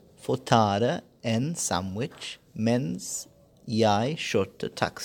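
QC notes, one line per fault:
Nothing to flag here, so no fault lines this time.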